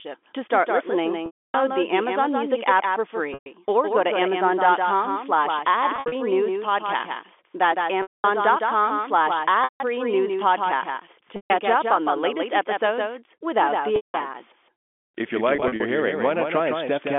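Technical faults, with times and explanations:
throughout, doubled audio track: a second full-band copy of the sound trails the original by around 150 ms at about 5 dB quieter, with no decay or room colour. This is likely from the audio being captured again through a slower path and mixed back in.
1.26–1.54 s (after "start listening"), 3.34–3.46, 5.96–6.12, 8.02–8.24, 9.64–9.80 (before "news podcasts"), 11.36–11.50 (between "news podcasts" and "up on the latest"), 13.96–14.14, 15.56–15.80 s, packet loss with pitch repetition: the sound briefly freezes into a held, buzzy tone. The longest gaps, 280 ms at 1.26 s and 220 ms at 8.02 s, fade to silence before the sound cross-fades back. At 5.96 and 15.56 s the losses are scattered short dropouts. Lost packets were concealed by repeating the last pitch period.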